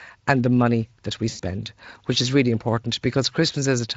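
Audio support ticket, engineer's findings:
Dropout after "the money that we", 1.29–1.41 s. VoIP packet loss concealed by the speech codec: about 100 ms lost, fits five 20 ms frames. Decoder extrapolates a buzzy or noise-like, fading tail.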